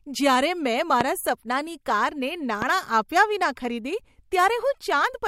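Speech with two loud pops, at 1.01–1.04 s before "સપનાની કારને" and 2.62–2.65 s before "આપ્યા વિના ખરીદી". They sit about 20 and 15 dB above the speech. Likely voltage spikes from a switch or static.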